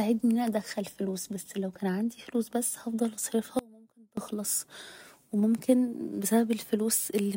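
Audio dropout to a faint residue at 3.59 to 4.17 s in this speech clip, right after "عندي فلوس بس هفضل": the signal cuts abruptly for about 0.58 s, leaving only a faint leak roughly 25 dB down, likely a brief break in the upstream feed while the path stayed live.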